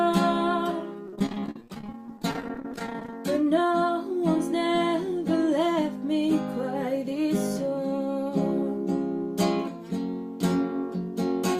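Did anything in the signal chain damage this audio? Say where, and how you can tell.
Yes. The damage happens at the network stage, as repeated packet loss (robotic sound) between about 1.07 and 3.13 s. Across that two-second stretch the audio turns choppy, breaking into dozens of brief holes, the longest about 43 ms. Each hole is bridged by extending the last received sound before the next one arrives, so roughly a third of the span is concealment rather than real signal. The rapid patching produces the robotic texture.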